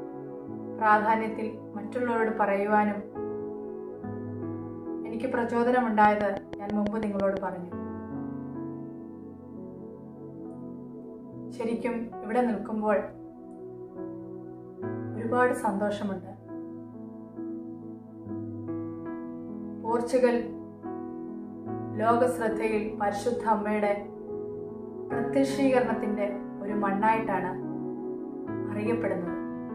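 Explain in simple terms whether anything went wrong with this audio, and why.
From about 6.05 to 7.38 seconds, a steady ticking sits on top of the audio: roughly ten sharp, near-identical pops, evenly spaced at about six per second, standing out well above the rest of the sound. This is a train of clicks. Something outside the recording most likely fired a short electrical pulse into the signal over and over, such as interference from nearby equipment or a faulty connection or power supply.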